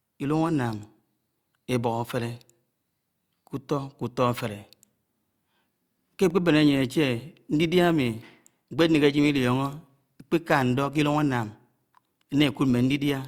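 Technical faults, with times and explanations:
6.30 s block of digital silence: samples drop abruptly to silence for 0.73 ms, causing a tick; flat notch in the waveform, thin broadband vertical stripe on the spectrogram.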